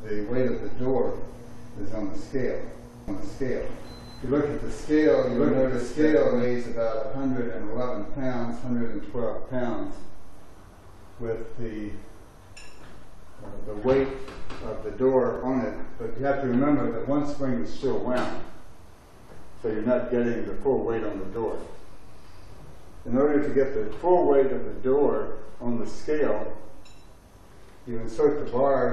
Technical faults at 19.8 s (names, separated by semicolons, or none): none